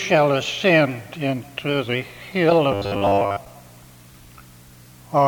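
From 2.72 to 3.39 s the sound turns into a rigid, metallic 100 Hz buzz, robotic sound from repeated short buffers, likely from about 10 ms chunks replayed in place of most of the audio.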